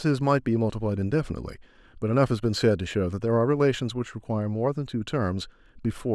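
Nothing in this stretch of speech stands out as a technical fault; there's no problem here to point to.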